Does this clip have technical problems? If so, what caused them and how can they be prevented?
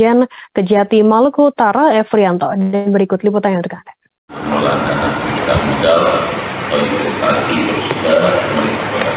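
Yes. Gain pumping runs through the whole clip: the gain swings by around 5 dB, pulling down on every loud sound and squashing the dynamics. The likely cause is input gain set far too high, with a fast limiter or compressor repeatedly pulling it back. Unlike a noise gate, which cuts the background to silence, this works by turning the gain down on loud sounds. Lowering the microphone gain so the limiter rarely acts would prevent it. The call path's narrow band, with nothing above 4 kHz, fits G.711 mu-law at 64 kbps and is not a fault.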